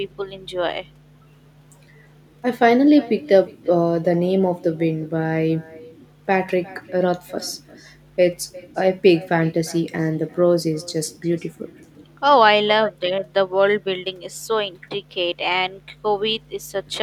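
A speech recording made on a call where the far end has no echo canceller: the other party's loudspeaker feeds back into their microphone and nothing subtracts it, so the talker's own voice returns after the network round trip. Throughout the clip every phrase is trailed by a faint copy, about 23 dB below the speech and arriving roughly 400 ms later, which sounds thinner than the original.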